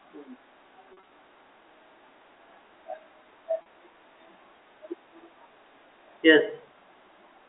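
From 0.93 to 1.11 s the speech turns briefly buzzy and held, as if a sound sticks for an instant, and the same slight hold recurs at 3.62 to 3.65 s. This is packet loss with pitch repetition. The receiver fills each gap by repeating the last pitch period. The first event spreads 100 ms of loss over 180 ms, with no run longer than 40 ms, so it never fades to silence. The second loses 40 ms. Both play through the narrow 300 to 3700 Hz band of G.711 telephone coding.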